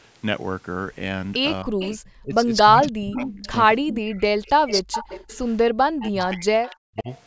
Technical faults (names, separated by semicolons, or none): speech suppressed in double talk; echo leak